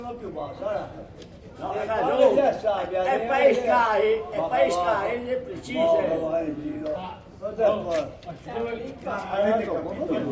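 Listening closely, nothing in the audio stood out as a technical fault at any point.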